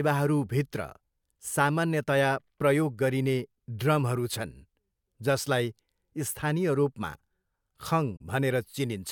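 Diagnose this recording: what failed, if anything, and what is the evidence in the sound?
The codec stage failed: a corrupt frame was concealed. Damaged AAC data was detected and the decoder masked it rather than decoding garbage. At 8.16 to 8.21 s the concealment covers about 56 ms, which fits roughly three frames.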